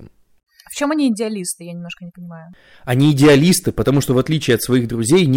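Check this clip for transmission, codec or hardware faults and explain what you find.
One fault is present: hard clipping. From 2.91 s to the end, the speech drives a stage about 11 dB beyond what it can pass, so its peaks are sliced flat. Those squared-off tops add harmonics far up the spectrum, heard as a harsh fuzz on every loud syllable. The waveform shows flat plateaus on the peaks. The spectrogram shows broadband vertical smears reaching the top bands.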